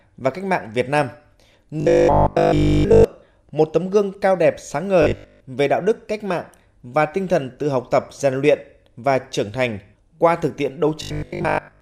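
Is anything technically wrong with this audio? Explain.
Yes. Robotic sound from repeated short buffers occurs at 1.80–3.04 s, 5.02–5.40 s and 11.02–11.80 s. A fixed 50 Hz metallic buzz fits a 20 ms segment being looped while real audio is skipped, likely because new audio arrived too seldom. The first stretch is entirely affected, the later two mostly.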